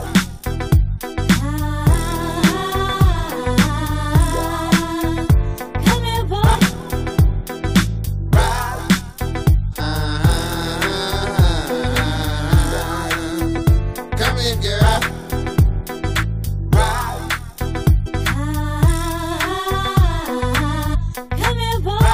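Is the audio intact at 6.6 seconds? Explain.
No, not quite. Just before that point, from 6.54 to 6.56 s, a brief glitch cuts through the sound, lasting only about 24 ms. It comes from damaged data in a compressed stream: a short run of the encoded bytes is wrong, so the decoder misreads or rejects the frames there, loses sync, and scans ahead for the next valid frame header. That brief misdecoding is what produces the glitch.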